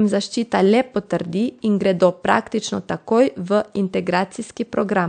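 No technical fault can be heard in this speech clip. The room noise sits well beneath the speech, about 47 dB lower, and is simply part of the recorded space.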